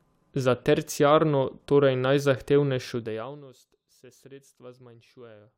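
Nothing goes wrong anywhere in this speech recording, and the smooth level changes that come and go are just smooth fader-style moves doing what they should.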